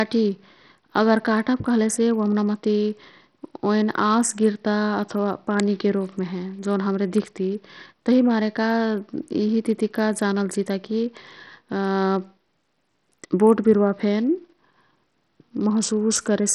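Throughout, the speech sounds gritty, its treble flickering and cut off above 13.2 kHz, likely from heavy Bluetooth SBC compression, which fits roughly 64 kbps.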